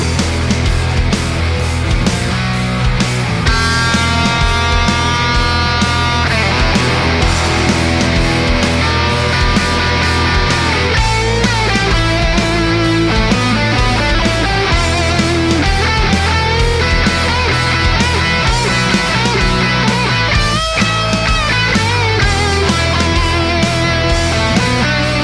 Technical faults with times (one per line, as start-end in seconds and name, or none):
none